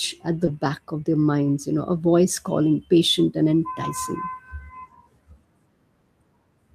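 It's a speech recording with a packet-loss hiccup right near the start. From about 0.45 to 0.49 s there's a short concealed packet loss: 20 ms of audio arrived too late, so the decoder stretched out the preceding sound to cover the hole and then eased back into the real signal, giving a quick smear or wobble. Overlapping the tail of that, from 0.47 to 0.49 s, one lost packet was rebuilt from error correction. The next packet carried a low-bitrate backup copy, so those 20 ms play without a gap but sound rougher and noisier than the surrounding audio.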